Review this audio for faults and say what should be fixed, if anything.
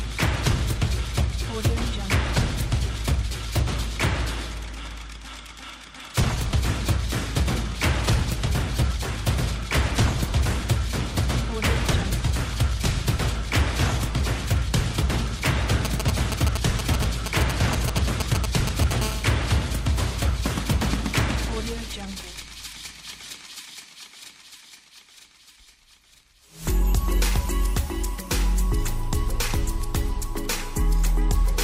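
From 15.85 to 18.93 s there are GSM signalling bursts: an irregular, galloping run of ticks and short buzzes pulsing at about 217 Hz, only a little below the level of the programme. A 2G phone close to the audio equipment was exchanging brief control transmissions with its network. Each group of radio pulses was rectified by a sensitive stage in the audio circuit, turning the RF envelope into audible clicks and buzz fragments.

From 19.02 to 21.18 s the pattern becomes a continuous GSM phone buzz, a hard, raspy tone at about 217 Hz with a dense harmonic series, sitting about 18 dB below the signal and unrelated to it. The phone has moved into a call and now transmits its time-slot bursts at a steady 217 per second. The audio circuitry demodulates that train into a constant buzz.

Both sections need replacing or repairing, and prevention is to keep mobile phones switched off or well away from microphones, cables and preamps, and to use shielded, properly grounded cabling with RF-filtered inputs.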